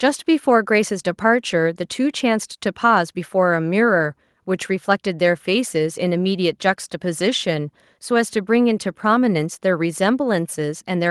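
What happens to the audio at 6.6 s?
Nothing goes wrong at 6.6 s; the speech carries on intact through that moment, with no dropout, click or other fault.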